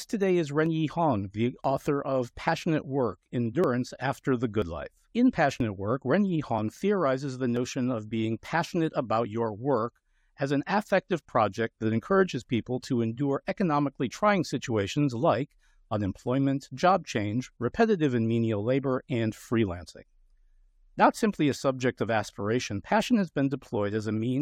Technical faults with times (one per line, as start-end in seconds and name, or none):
0.66 overlap between stream segments
1.64 overlap between stream segments
3.64 overlap between stream segments
4.62 overlap between stream segments
5.60 overlap between stream segments
7.56 overlap between stream segments